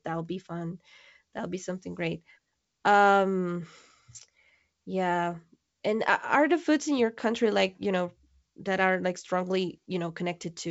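No technical faults can be heard in the speech, which carries the bandwidth of G.722 wideband telephone coding at 64 kbit/s, with at most a faint trace of the codec's light upper-band hiss.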